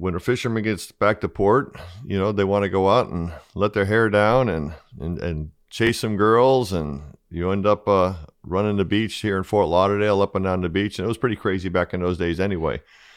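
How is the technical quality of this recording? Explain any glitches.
The recording has one glitch, a brief Bluetooth stutter from 5.87 to 5.89 s in the speech. About 20 ms of audio failed to arrive in time, so the receiver filled the gap by replaying the last slice it held. The result is a short repeated fragment, heard as a tiny hiccup or click-like stammer rather than a sustained buzz. The stutter is a single repeat, which points to one lost packet. Afterward the speech picks up further along, as though it had kept playing through the gap.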